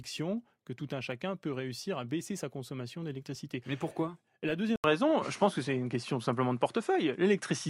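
At 4.76 s the recording most likely had its input switched to a poorer device, a different microphone or capture path taking over partway through. An 80 ms silence marks the switch, and from there to the end the speech is band-limited, with nothing above 11.2 kHz, so it sounds duller and less airy. The level also shifts by a few decibels, and a faint new background noise sits far beneath the speech.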